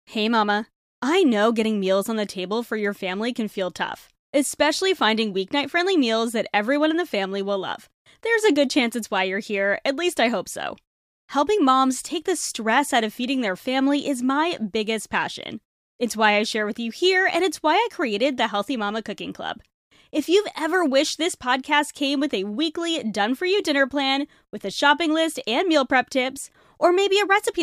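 Listening through the speech recording, nothing stood out as a technical problem at any point.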